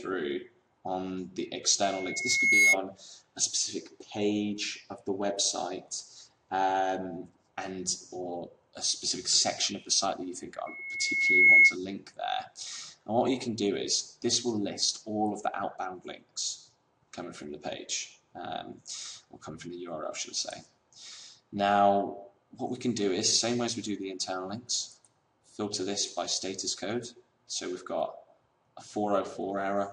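At 1.83 s a loudspeaker feedback squeal kicks in. A mic is hearing the speaker it feeds, and the loop gain tops one at 2.2 kHz, so that tone feeds on itself. It swells over well under a second to roughly 10 dB above the program, then cuts at 2.77 s. It comes back at 10.66 s, the same 2.2 kHz pitch with the same quick build, but louder this time, around 15 dB up, before dying at 11.76 s.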